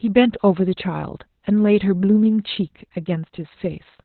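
Opus voice compression affects the speech throughout. Nothing remains above 4.3 kHz, so the band has been cut to narrowband SILK coding. The coarse excitation leaves it muffled, hoarse and slightly robotic. The heavy damage points to a bitrate of about 8 kbps.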